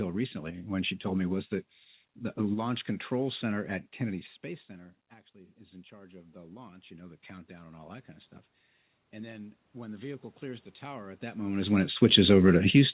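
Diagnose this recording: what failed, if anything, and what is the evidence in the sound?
Automatic gain rising, in the call processing stage. The input fell about 22 dB. From 5.32 to 8.14 s, speech and room noise swell by about 10 dB, up to "of stuff". From 9.12 to 11.5 s, before "is when it", they rise about 4 dB more. The AGC slowly raised its gain.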